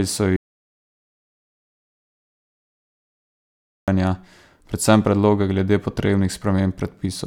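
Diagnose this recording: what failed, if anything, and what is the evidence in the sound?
An audio dropout to silence runs from 0.36 s to 3.88 s, erasing about 3.5 s of speech: the sound stops abruptly, with no room tone, then resumes mid-flow. On the waveform it is a flat line, blank on the spectrogram, most likely from lost input upstream of the recorder.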